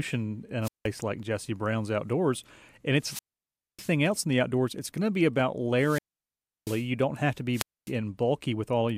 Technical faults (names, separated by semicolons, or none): wireless microphone squelch dropout